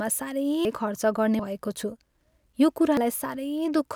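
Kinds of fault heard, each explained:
Dropped buffer (overrun) at 0.65, 1.39, 2.04 and 2.97 s: each is a jump where the speech skips ahead with no silence, losing roughly a third of a second (about a tenth at 1.39 s, before "भएको छु"), likely from samples overwritten before collection.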